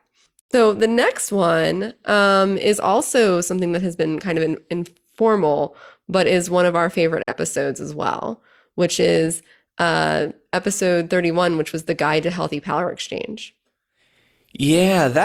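At 0.40 s the speech drops out in a digital broadcast dropout, returning by 0.53 s before "the next one um". Another hole follows at 7.23 to 7.33 s, after "one of our favorite". The receiver lost valid frames and muted with a 3 ms fade. The gaps point to one or two lost frames of about 43 ms each.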